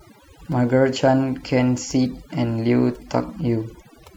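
From start to finish the background drops to near silence dotted with twinkling specks. This is overdone noise removal: an overly aggressive noise reducer cut individual frequency bands sitting near its noise estimate, taking quieter speech detail with them.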